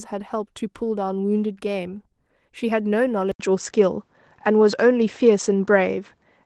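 Speech, where at 3.32 s an 80 ms gap gives way to a duller sound cut off at 7.7 kHz and roughly 5 dB different in level. This is likely an input switched to a poorer device, visible as a waveform break and a sudden spectrogram ceiling.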